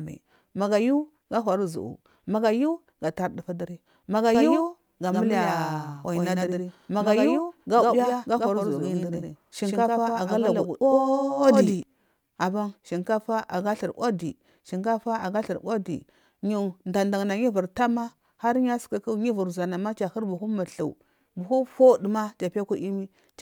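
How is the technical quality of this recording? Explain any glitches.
The recording has one clear technical fault, a doubled audio track from 4.35 s to 11.83 s. Over that span a second, full-band copy of the speech runs roughly a tenth of a second behind the original and a few dB quieter. Each syllable gets a flat, dry echo with no room decay, and the copy cuts in and out abruptly at both ends. The likely cause is a second capture path with extra latency, or an edit that left two misaligned copies in the mix.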